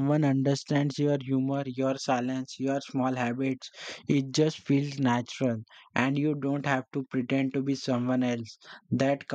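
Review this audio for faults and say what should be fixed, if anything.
Nothing needs fixing: the speech signal holds steady throughout, with no interruptions, level jumps or added noise to correct.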